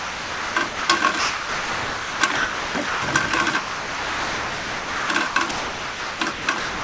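From 0.0 to 0.89 s, 1.19 to 3.02 s and 3.59 to 6.84 s, sound repeatedly gives way to flat, steady hiss, likely sound chopped by the voice detector. Unlike packet-loss dropouts, the gaps fill with smooth comfort noise rather than silence or glitches.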